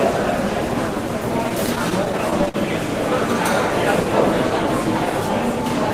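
From 1.49 to 2.56 s there are repeated stalls (stutter): the jitter buffer keeps running dry, so about a dozen short gaps, up to 53 ms each, get filled by stretching the last sound.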